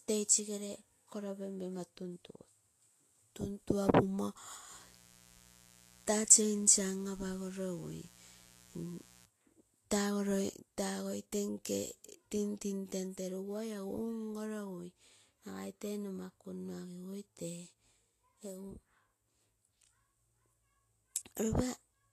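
From the start and through the whole recording, the speech has likely been through low-bitrate Vorbis compression. The damage is plainly audible and fits a rate around 34 kbps. The encoder seems to have spent too few bits on the treble, quantising it so coarsely that fine detail turned into hiss-like noise. Nothing is left above 14.2 kHz. The result is a grainy, hissy texture, with softened consonant attacks and a roughened edge on voiced sounds.

From 4.71 s to 9.26 s, mains buzz intrudes. Switching spikes from the 60 Hz supply leak into the signal path twice every cycle, adding a dense train of harmonics that climbs well into the kilohertz range. It sits well beneath the speech, at about 25 dB down. It is heard as a steady, raspy buzz.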